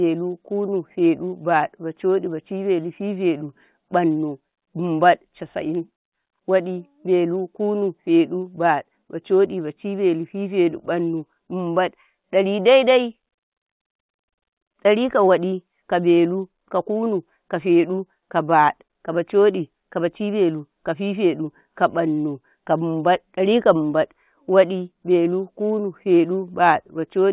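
Nothing in this speech clip stands out as a technical fault. It has come through a WebRTC call path with nothing above 4 kHz, a narrowband sound that fits G.711 mu-law at 64 kbps.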